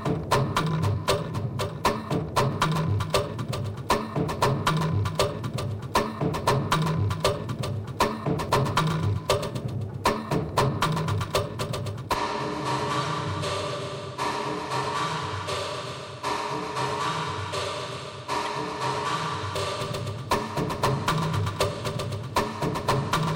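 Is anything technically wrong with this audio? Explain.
Yes. There are two instances of corrupt frame decoded, at 13.01 to 13.05 s (about two frames) and at 18.45 s (one frame). Damaged compressed data was decoded anyway, so misread gains put energy at wrong frequencies. Each sounds like a brief chirp, squeak, blip or burst of noise, with error peaking around -20 dBFS, and on a spectrogram shows as a short, sharp-edged smear of stray energy.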